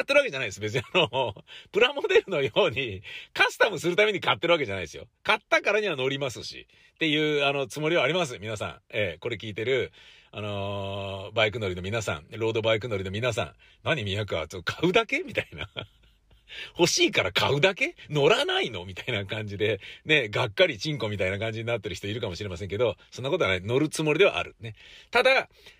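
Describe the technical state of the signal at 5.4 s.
At 5.4 s the speech signal is intact, with no dropout, clipping, glitch or other fault to be heard.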